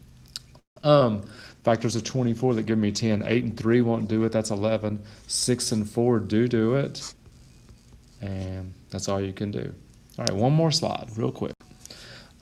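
From 0.59 to 0.78 s the sound stalls: the last sound carries on briefly, then about 0.13 s of silence follows before it resumes where it left off. This call audio freeze most likely comes from delayed packets draining the jitter buffer. Unlike packet loss, it adds a pause of about 0.17 s without dropping any content.

Right after, at 0.82 to 0.85 s and again at 0.99 to 1.02 s, short concealed packet loss leaves quick smears. Each time about 20 ms never reached the decoder and was patched by extending the previous sound. These are much shorter than the freeze, and they replace audio rather than delaying it.

From 1.37 to 7.58 s a call bitrate drop takes the encoder from 96 to 16 kbps, holding the lowest rate for about 3 s. The audio turns coarse, watery and muffled as high frequencies are cut.

Overlapping the end of the drop, from 6.51 to 7.77 s, a jitter buffer speed-up plays the audio at 114% speed with unchanged pitch by trimming pitch-period slices, roughly 0.2 s in total. 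It sounds hurried.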